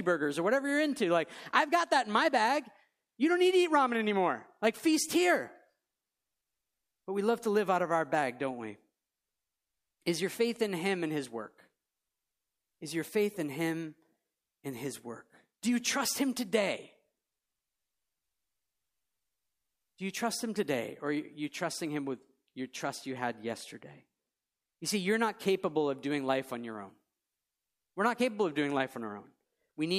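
No technical faults can be heard anywhere in the recording.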